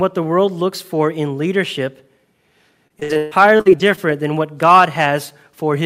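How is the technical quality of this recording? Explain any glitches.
There is one glitch. Repeated packet loss (robotic sound) runs from 2.87 to 3.99 s. Nine dropouts, the longest 140 ms, were patched by stretching the preceding sound, which covers about a third of that stretch. The speech turns choppy, with pieces missing.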